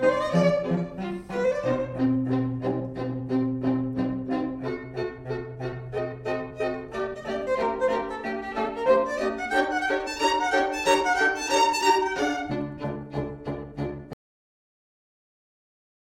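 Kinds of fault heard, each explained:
Cut-off end: the final buffers never played, so sound halts abruptly at 14.13 s into dead digital silence, with no natural decay or fade like a deliberate ending.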